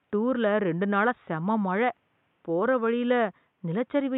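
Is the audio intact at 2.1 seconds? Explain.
Yes, the audio is intact at 2.1 seconds, with only the room's background noise sitting about 48 dB below the speech.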